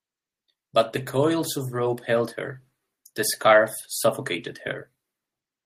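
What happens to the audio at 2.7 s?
At 2.7 s the speech sits inside a stretch of automatic gain rising, running from 1.11 s to 3.76 s. The gain control judged the input too quiet and lifted its gain slowly, by about 4 dB, so the voice and background swell together.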